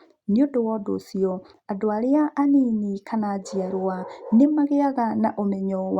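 A speech recording, and there is nothing technically wrong with it.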